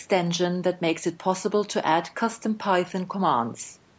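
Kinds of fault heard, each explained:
No fault can be heard anywhere in the speech. It has passed through a call's microphone processing, which is working normally, and that path leaves nothing above 8 kHz.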